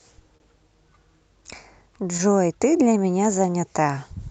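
Throughout the speech, clock drift between sender and receiver is audible: the sender's clock runs about 2% slow, so the receiver's jitter buffer keeps draining and timing wavers slightly.

At 0.37 to 0.42 s, a short stall from a late packet occurs. The buffer ran empty and the receiver stretched the preceding sound by 26 ms, giving a held moment with nothing lost.

From 1.50 to 4.29 s, repeated timing corrections run at 98% speed. Small segments are repeated, adding roughly 50 ms in total.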